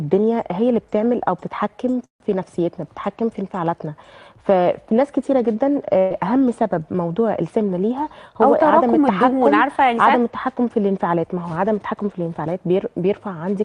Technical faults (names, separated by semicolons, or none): call audio freeze; burst of packet loss